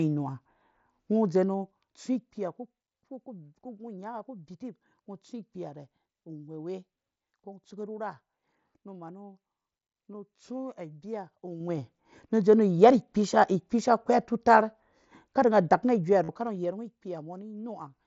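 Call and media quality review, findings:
Zipper noise, 1.28–2.73 s: fine ticking rides on the speech while the level falls by roughly 15 dB, about ten clicks a second. Probable cause is a gain stage stepping in 1 dB increments per block with no smoothing, each jump leaving a small discontinuity.

Concealed Bluetooth headset packet loss, 9.63 s and 16.24–16.29 s: a brief 15 ms fill at 9.63 s, then a short buzzy held tone lasting 45 ms at 16.24 s, with a slight warble as the speech resumes. Headset link dropped packets, and the receiver filled each gap by repeating the closest-matching slice of recent waveform. The 15 ms gap is short, and the longer run exposes the loop.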